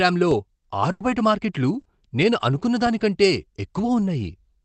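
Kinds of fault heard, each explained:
Burst of packet loss: Around 0.91 to 1.03 s, several packets in a row never arrived in time. The receiver stretched the last sound for about 90 ms while fading it, then skipped roughly 60 ms. Unlike a rebuilt packet, the sound is truly missing.
Lost packet rebuilt from error correction: At 1.00 to 1.06 s and 1.79 to 1.85 s, about 60 ms each, a lost packet was replayed from the low-bitrate copy carried by the next one. These stretches sound briefly rougher and noisier, but nothing is skipped and there is no fade.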